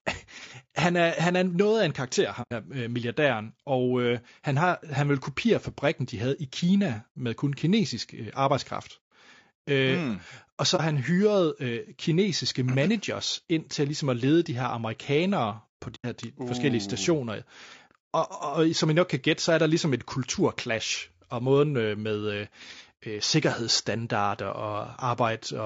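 Low-delay AAC compression runs through the whole of this speech recording, with the rough, grainy texture and noisy gaps between harmonics that likely come from AAC-ELD at around 32 kbps. AAC frame loss with muting leaves soft holes at 2.42–2.52 s after "noget af en karakter", at 10.76–10.81 s before "hyrede øh kinesiske managers", and at 15.95–16.06 s after "de her amerikanere på". The decoder zeroed the missing spectra, and the gap lengths fit three, one and three lost frames.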